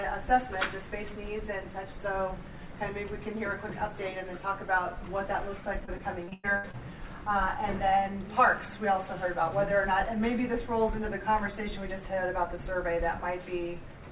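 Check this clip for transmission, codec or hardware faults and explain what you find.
There's one fault: a burst of repeated packet loss, giving a robotic sound from 5.8 to 6.75 s. Across that second, eight separate gaps open up, the longest about 102 ms. Each gap gets patched by stretching the last bit of audio forward, so roughly a third of the span is concealment rather than real signal. That's where the choppy, robotic stutter comes from. Note that the audio never extends above 4 kHz, which fits a narrowband G.711-style call codec.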